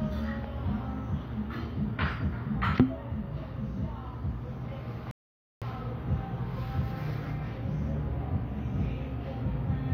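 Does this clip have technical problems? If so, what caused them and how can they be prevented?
Yes, there's one: a rebuffering stall at 5.11 s. The audio drops to silence and picks up again at 5.62 s, right where it left off, so nothing's missing, but about half a second of dead air (0.51 s) gets inserted. That's the player draining its download buffer and pausing until more data shows up. To prevent it, give the player a bigger buffer or lower the stream bitrate so the connection can keep ahead of playback.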